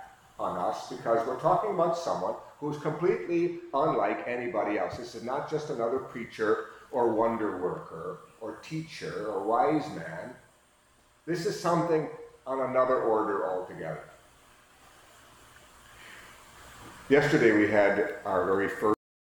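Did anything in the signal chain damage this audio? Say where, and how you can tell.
Yes, there's a cut-off end, and it happened at the buffer or storage stage. At 18.94 s the sound stops mid-event and drops straight to digital silence with no decay through to the end. The final buffers were never written out, so the tail is missing.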